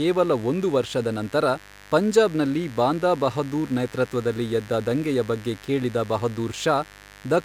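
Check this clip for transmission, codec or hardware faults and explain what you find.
Mains buzz runs through the whole speech clip. Switching spikes twice per 50 Hz cycle add harmonics into the kilohertz range. The result is a steady, raspy buzz, about 25 dB below the speech.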